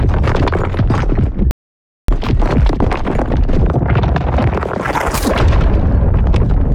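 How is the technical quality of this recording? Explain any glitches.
The recording is marred by a playback stall. From 1.51 to 2.08 s the sound cuts out for about 573 ms, likely because the player ran short of data, then resumes; a flat, empty gap appears on waveform and spectrogram.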